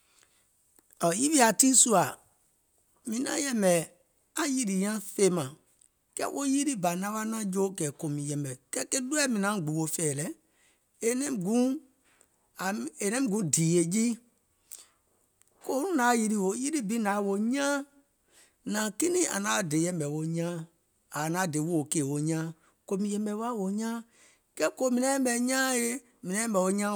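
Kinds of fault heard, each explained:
No kinds of fault are heard in this speech clip.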